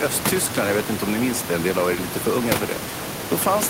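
No technical faults can be heard in this recording.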